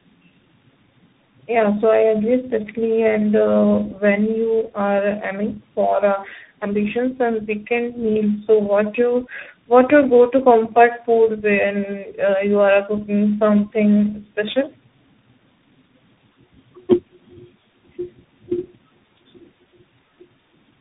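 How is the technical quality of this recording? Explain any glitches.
Quality is poor throughout, with one compounding fault. Tandem speech coding, throughout: AMR-NB, iLBC and CVSD each re-encoded the previous coder's damaged output, stacking roughness and warble, muffled with nothing above 3.8 kHz.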